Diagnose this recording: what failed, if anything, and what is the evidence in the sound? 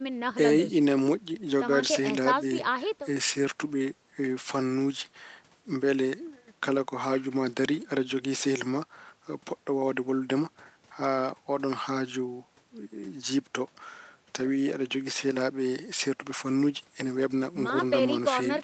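Nothing in this speech recording points to a failure at any stage of the chain. The sound carries nothing above 8 kHz, which is the expected band limit of a call path and fits an Opus codec running at around 24 kbps with its normal coding noise.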